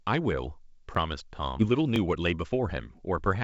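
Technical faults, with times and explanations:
0.95 s, 1.96 s and 2.97 s, overlapping chunks: at each of these points a tiny stutter or click appears, spaced almost exactly 1 s apart. The audio is being handled in one-second blocks, and each new block begins slightly before the previous one finished, so about 12 ms of speech plays twice at every join. That repeat is too short to hear as an echo and lands as a brief catch at each boundary.
1.59 to 1.61 s, skip ahead: the speech jumps abruptly forward with no silence or fill at the join. Roughly 0.7 s of speech is gone, probably discarded by an overfull jitter buffer while later audio was already queued and ready. The playback delay drops by about the same amount, and the sounds on either side of the cut butt directly against each other, so part of the utterance simply vanishes mid-flow.
1.71 to 3.43 s, jitter buffer speed-up: from just after the skip to the end, the speech runs about 9% fast while the pitch stays unchanged, giving a slightly hurried, clipped delivery. 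The receiver is still holding more audio than it wants, so it repeatedly cuts out short slices, each one or a few pitch periods long, to shrink the delay. The band stops at 8 kHz, which fits a G.722 call path.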